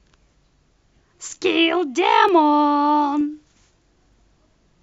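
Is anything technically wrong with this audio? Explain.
Yes. Clock drift buffer slips occur from 0.43 s to 4.13 s, recurring every 0.93 s, about five in all. The likely cause is two devices running on separate clocks that disagree by a couple of hundred parts per million, so the buffer between them slowly drifts until a handful of samples is dropped or repeated to catch up. Each correction is heard as a regular click in the speech.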